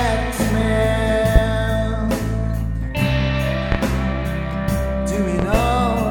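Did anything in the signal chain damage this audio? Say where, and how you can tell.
Yes. Loud pops strike at 1.36–1.40 s and 3.72–3.76 s, then a double pop at 5.39–5.58 s, up to about 20 dB above the sound. These are likely voltage steps in the analogue wiring.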